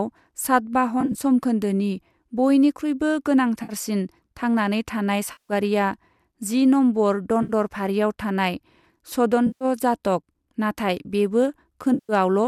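Six dropouts in this speech are AAC frame loss with concealment, at 1.01, 3.63, 5.32, 7.43, 9.47 and 11.94 s. Each gap, lasting 60 to 170 ms, is papered over from the previous spectrum. The result is a smeared, phasey, noisy patch, and the first and fifth come as scattered short bursts. The codec underneath is likely a low-delay AAC stream at 64 kbps, with light damage.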